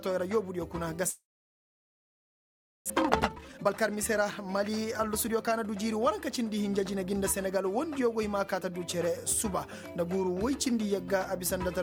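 At 1.09 s the sound cuts off into a brief fading buzz, then falls to silence or a faint steady noise for nearly all of the stretch up to 2.92 s, about 1.7 s of it. When audio returns, about a second of material is simply gone. This is most likely a long network dropout: no packets arrived, the receiver stretched the last sound briefly before giving up, and the delay built up by roughly 0.7 s.

From 2.93 s to 5.47 s the audio runs at about 129% of normal speed while keeping its pitch, so it sounds hurried and pressed together. This is a jitter buffer speed-up. After the gap, more audio was waiting in the buffer than it aims to hold, so the receiver repeatedly cut out tiny pitch-period slices, removing roughly 0.7 s in total to bring the delay back down.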